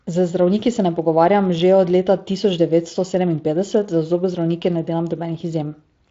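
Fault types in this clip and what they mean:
The speech carries the light coding texture of a wideband speech codec, consistent with a rate near 24 kbps, and its band ends at about 7.6 kHz.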